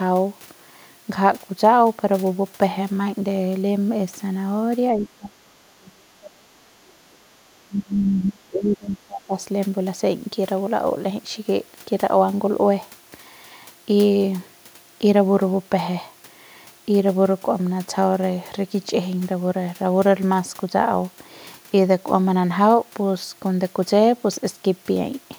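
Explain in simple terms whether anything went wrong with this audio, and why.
Speech suppressed in double talk happens twice, from 4.91 to 6.52 s and from 7.64 to 9.37 s. Each time the speech suddenly becomes much quieter for roughly a second and a half, then recovers. The likely cause is someone on the far end talking at the same moment. The echo canceller couldn't tell this talker apart from the echo of its own loudspeaker, so it turned both down together.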